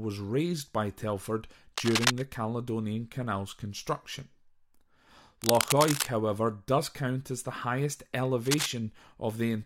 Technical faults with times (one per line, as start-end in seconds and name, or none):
1.76-2.23 cable scratch noise
5.42-6.07 cable scratch noise
8.45-8.67 cable scratch noise